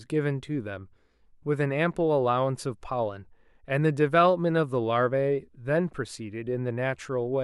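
No technical faults are audible anywhere in the speech recording.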